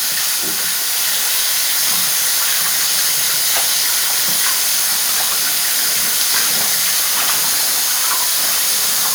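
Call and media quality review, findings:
Block size mismatch (truncated), whole clip: steady buzz near 92 Hz, audio running about 1.07x fast at roughly normal pitch. Probable buffer handoff between stages: the writer's blocks are longer than the reader takes, so each block's tail gets dropped. Fits 512-sample writes.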